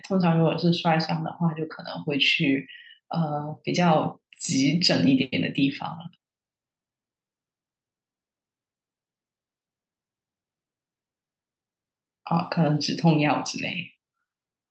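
Nothing goes wrong anywhere in this speech recording.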